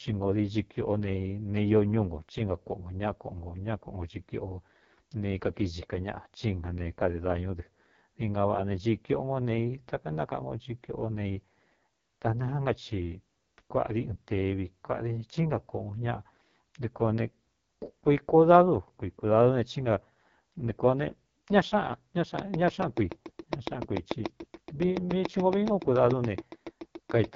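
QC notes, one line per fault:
Throughout: AMR wideband (HD Voice) codec. The speech was squeezed to 6.6 kbit/s, one of the codec's lowest rates, so its pulse-driven vocal tract model has too few bits. The result is heavy rough, raspy damage, with nothing above 7.5 kHz.
22.39 to 27.25 s: Train of clicks. A regular run of about 40 near-identical pulses, 7 per second, sits about 15 dB above the speech and ticks through pauses too. It is likely interference from nearby equipment or a faulty connection or power supply.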